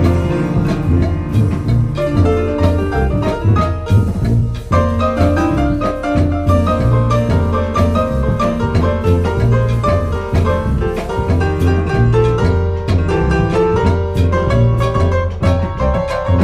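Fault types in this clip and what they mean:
Corrupt frame concealed: the decoder caught damaged compressed data and covered it at 4.39–4.42 s and 10.78–10.82 s, the second spanning two frames.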